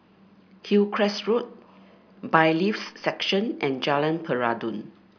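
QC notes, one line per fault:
No fault found in this speech clip.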